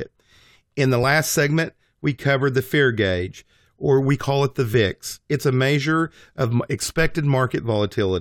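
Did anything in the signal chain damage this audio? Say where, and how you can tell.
No, no damage is audible.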